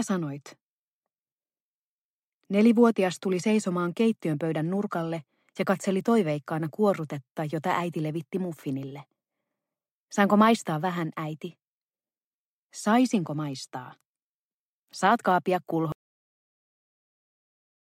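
The audio runs along and then just quits at about 15.92 s, a classic cut-off end. The sound stops mid-stream with no tail or natural decay, and everything after that point is flat digital silence right to the end of the file. What you're hearing is the final stretch of buffers never getting written out, so the recording was closed before the last of the material made it to disk or playback.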